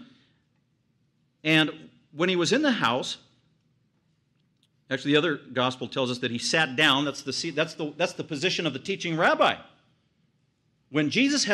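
Hard clipping hits this speech four times: 1.50 to 1.62 s, 2.83 to 2.87 s, 6.58 to 6.93 s and 9.24 to 9.49 s. Each time the level runs past what a stage in the chain can pass, by about 2 to 4 dB, and the peaks are sheared flat. Those flat tops add high harmonics, heard as a brief crackly rasp riding the loudest syllables. Unlike soft saturation, the edge is abrupt and gritty rather than a rounded warmth.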